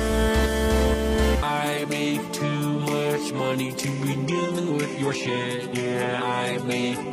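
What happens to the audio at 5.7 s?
At 5.7 s the sound has codec artefacts, a stretch that begins abruptly and without any gap at 4.26 s and lasts to the end. It is an adaptive stream at a lower bitrate: the connection slowed, and the sound fits a switch from 96 kbit/s AAC to 16 kbit/s HE-AAC.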